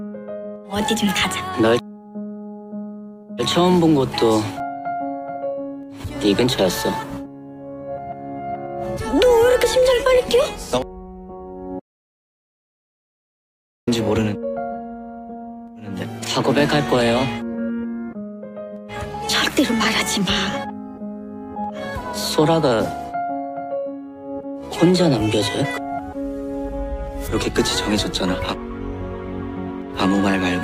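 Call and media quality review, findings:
Audio dropout to silence, 11.80–13.87 s: sound cuts mid-flow to total silence, no room tone, about 2.1 s lost. Likely input loss while recording continued.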